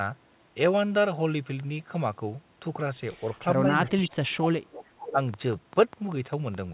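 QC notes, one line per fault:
3.63–4.72 s and 5.11–5.18 s, speech suppressed in double talk: the voice is pushed down hard for about a second in the first stretch, dipping by roughly 30 dB at its deepest, then again briefly for 70 ms by about 10 dB. This is likely an echo canceller that could not tell near speech from far-end echo and muted both. On a waveform the envelope collapses into gaps. On a spectrogram energy fades across the whole 4 kHz band of this call path.
3.86–4.10 s and 4.71–5.13 s, echo leak: a second, fainter copy of the voice trails the original by 437 ms, at about 10 dB below the speech in the first stretch and about 15 dB below in the second. This is likely loudspeaker pickup that the far end's canceller failed to remove and sent back. A spectrogram shows the same harmonic patterns repeated at a fixed lag at lower intensity, and the waveform shows low-level bursts filling the gaps.
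5.34–6.73 s, train of clicks: sharp, near-identical ticks arrive at a steady pace of about five per second until the end, peaking about 5 dB above the signal. They are likely caused by interference from nearby equipment or a faltering interface. They are audible as a ticking over the sound and in its pauses. A waveform shows evenly spaced narrow spikes. A spectrogram shows thin vertical lines spanning the full band at regular intervals.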